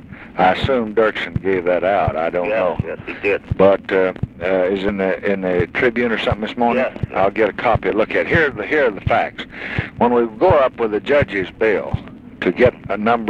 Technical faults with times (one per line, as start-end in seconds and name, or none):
4.88 compressed frames skipped